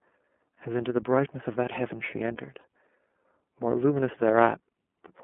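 Throughout, the speech has passed through the iLBC codec, which codes each frame's excitation independently. The line band runs from 200 Hz to 3.4 kHz, so nothing above that survives. The plainly audible roughness and synthetic edge fit the 13.33 kbps, 30 ms-frame mode.

From 2.61 to 2.64 s, a packet was dropped and the decoder filled the 30 ms gap by repeating the last pitch cycle blended with noise, which fits a single lost iLBC frame. It sounds like a brief held, slightly buzzy vowel, and normal speech returns immediately afterwards.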